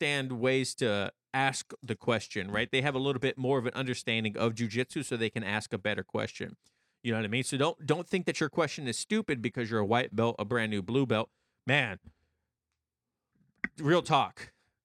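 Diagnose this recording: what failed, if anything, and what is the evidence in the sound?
Nothing failed: no stage of the chain, from wiring and conversion through to playback, leaves an audible defect anywhere in this speech.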